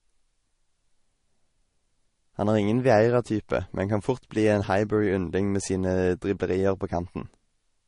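From start to finish the speech sounds dull, with nothing above 10.6 kHz, and two kinds of coding damage are layered together: the artefacts of both codecs are heard at once. That points to transcoding between lossy codecs, likely a low-bitrate MP3 re-encoded as Vorbis.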